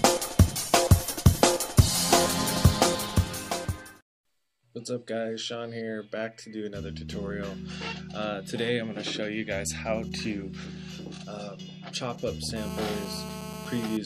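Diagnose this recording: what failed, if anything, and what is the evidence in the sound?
Something went wrong in the analogue wiring: a GSM phone buzz comes in from 12.56 to 13.97 s. It's a hard, raspy 217 Hz buzz full of harmonics, holding steady at about 13 dB under the signal. A nearby phone on a call sends radio bursts that the audio circuitry rectifies.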